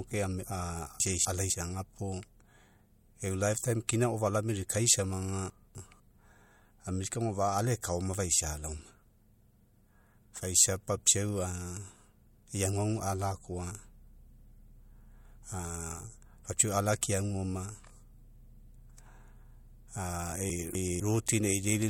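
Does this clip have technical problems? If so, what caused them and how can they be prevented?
Yes. Chunks out of order: at 1.0–1.5 s, 5.5–6.0 s and 20.5–21.0 s, a 250 ms chunk was delivered one slot late and swapped with its neighbour, so the speech jumbles briefly. Prevent this by sequence-numbering chunks and reordering them in a jitter buffer before playback.

Pre-echo: the transform codec kept a long window of about 26 ms and apparently never switched to short blocks at sharp onsets. Its quantisation noise spread ahead of the attacks at 3.88 s (about 14 dB rise) and 17.01 s (about 18 dB rise), smearing them with a preceding hiss. Prevent this by enabling transient detection with block switching, or by using a higher bitrate.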